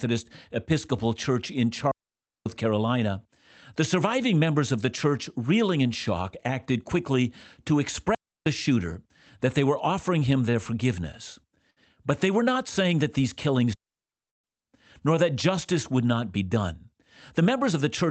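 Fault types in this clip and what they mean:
Digital wireless dropout: The receiver lost too much data and muted the sound with a very short fade. Each one is a clean hole of near silence. No noise burst comes before or after. The first runs from 1.91 to 2.46 s, about 0.55 s. The second lasts about 0.31 s, between "shock acted quickly to" and "shooter that they were". The third is the longest, about 0.76 s, between "saying that these killings" and "nor that justice would".
Short stall from a late packet: A packet arrived late and the jitter buffer ran dry. The receiver held the last sound until the packet came, then carried on from the same spot. Nothing is lost. The sound just lingers too long, with a faint buzz or dip. The first stall, at 10.51 to 10.55 s, stretches the sound by 25 ms. The second, at 11.70 to 11.78 s, holds it for 62 ms.
Call audio freeze: From 14.28 to 14.46 s, inside the third dropout and just before "nor that justice would", the sound stops for 152 ms, nearly all of it silent. 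Then it resumes where it left off. Nothing is missing. Time has simply been inserted. This is likely a freeze caused by delayed packets emptying the jitter buffer, with the receiver bridging the wait before the audio continued.
Jitter buffer speed-up: Too much audio had built up in the buffer. To cut the delay, the receiver kept removing tiny pitch-period slices. The pitch stays the same, but the delivery turns hurried. From 16.36 to 16.95 s the speech runs at 110% speed, losing some 70 ms in total. From 17.38 to 18.03 s it runs at 106%, dropping around 40 ms. Both stretches sound rushed rather than higher in pitch.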